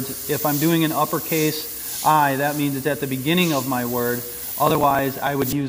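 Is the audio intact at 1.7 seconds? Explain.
Yes, the audio is intact at 1.7 seconds, with no dropout, click, distortion or other fault heard at that point.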